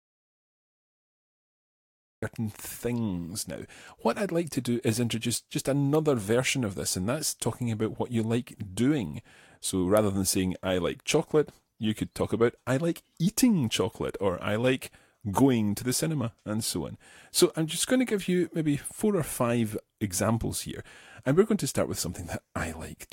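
From the very start to 2.23 s the clip is an audio dropout to silence: dead silence with no room tone, after which the speech comes in mid-flow. The input signal was likely lost while recording continued, so whatever preceded that point is missing.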